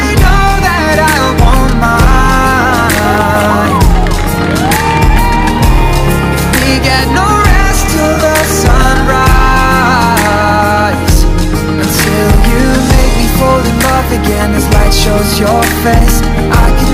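Hard clipping runs through the whole clip. The signal is driven about 4 dB beyond what the stage can pass, so roughly one sample in twenty is cut flat. Peaks crackle harshly, the waveform shows squared-off tops, and the spectrogram shows harmonic smear reaching high.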